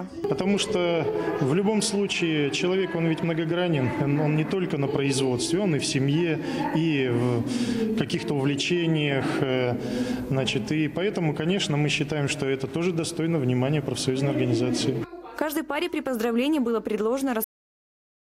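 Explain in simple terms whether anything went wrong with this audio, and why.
Near 17.44 s the sound stops abruptly mid-flow and falls to dead silence: a cut-off end, where the final stretch of audio was never written or played.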